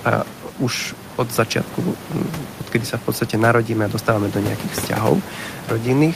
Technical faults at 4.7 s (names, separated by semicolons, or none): none